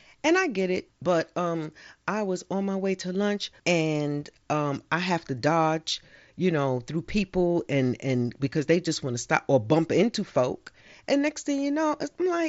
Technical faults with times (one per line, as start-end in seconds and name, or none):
none